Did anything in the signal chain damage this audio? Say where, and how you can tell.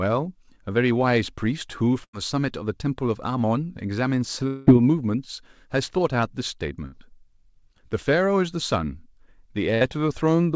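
Yes. The network stage shows a burst of packet loss at 2.04–2.15 s and 9.74–9.83 s. About 100 ms and 60 ms of speech vanish. Concealment repeats the last sound and fades it, so a spectrogram shows smeared, stretched copies of the preceding frame before speech jumps ahead.

At 4.47–4.69 s the sound freezes into a fading buzz or hiss for about 200 ms, then resumes with speech skipped. The likely cause is a long network dropout. The waveform shows a decaying concealment signal bridging the whole gap with no true silence. Everything above 8 kHz is absent, consistent with a wideband call codec.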